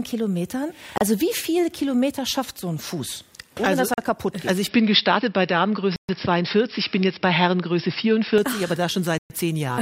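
Bluetooth stall at 0.98 to 1.01 s and again at 3.94 to 3.98 s: the sound drops to silence for 32 ms and then 40 ms before carrying on. Likely cause: radio interference delayed packets, so the headphones' buffer emptied and playback waited for the retransmissions.

Input switched to a poorer device from 4.68 to 8.38 s: with no gap at the changeover, the sound turns duller and boxier, with nothing above 5.5 kHz, a shift in level of around 5 dB, and a new noise floor roughly 45 dB under the signal. This likely comes from the system moving recording onto a narrower-band microphone or a headset's call profile, which brings its own tone and background noise. The full band returns at 8.38 s.

Inside that stretch, a longer Bluetooth stall at 5.96 to 6.09 s silences the sound for 128 ms. A final one at 9.18 to 9.30 s cuts out for 118 ms before playback resumes.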